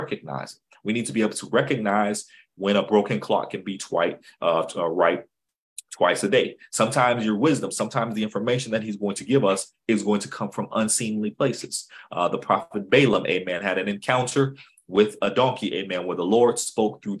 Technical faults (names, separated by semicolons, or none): none